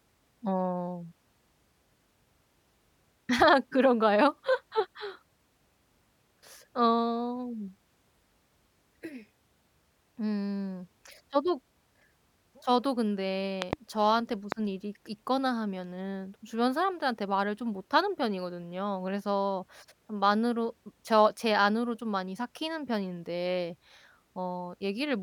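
Loud pops at 13.62 to 13.75 s and 14.52 to 14.54 s: a sudden voltage pulse, likely from a plug, switch or static discharge, lands on the signal path and is passed through the later circuits. The first event is a double pop, two sharp hits in quick succession, peaking roughly 20 dB above the speech. The second is a single, shorter pop about 15 dB above it. The speech continues underneath both.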